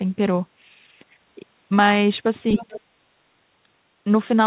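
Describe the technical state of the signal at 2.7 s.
At 2.7 s two faults overlap. The other side's voice leaks through from 2.54 to 2.81 s, a faint second voice about 15 dB below the talker. The likely cause is loudspeaker echo that the echo canceller failed to remove from the microphone.

In the same window, from 2.56 to 2.78 s, the talker's speech is suppressed in double talk. The level dips by roughly 30 dB at its deepest, and the speech is affected for around a fifth of a second. This likely happened because the canceller could not separate near speech from echo and attenuated both.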